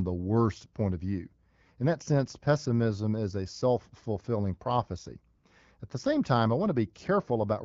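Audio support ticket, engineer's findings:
Background abruptly replaced by steady, smooth synthetic hiss at 5.37–5.43 s, just after "a self fulfilling prophecy". AMR comfort noise: speech frames halted for 60 ms, and the receiver substitutes generated noise.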